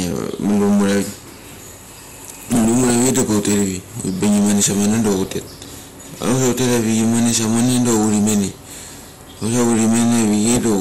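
Hard clipping runs through the whole recording. The speech is driven about 14 dB past what the chain can pass, so roughly one sample in seven is cut flat. The squared-off peaks add high harmonics, giving a harsh fuzz on every loud syllable.

Throughout, the sound is also dull and granular, with a gurgling, watery texture in the highs. The likely cause is MP2 compression at a rate around 80 kbps. Too few bits leave upper sub-bands switched off or flickering, and the rest coarsely quantised.

DAB burbling breaks in four times: from 2.59 to 3.09 s, from 5.25 to 5.51 s, from 8.65 to 9.20 s, and from 10.45 to 10.59 s. Bit errors slip past error correction into the coded audio, so wrong samples put short blips of noise in single sub-bands, and wrong scale factors make sub-bands jump in level for up to a frame. The result is burbling noise over the speech.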